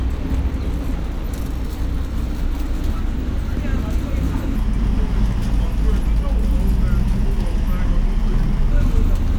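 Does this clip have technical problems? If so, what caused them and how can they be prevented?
Yes. From 4.56 s to 8.71 s there is a section at the wrong speed. The audio suddenly slows to about 0.8 times its normal rate. Pitch drops with it, by about four semitones, so the sounds turn deeper and more drawn out. Both change together at the boundaries. This is likely from an editor or player running that section against the wrong clock. To prevent it, keep clock rates matched and check speed at every edit point.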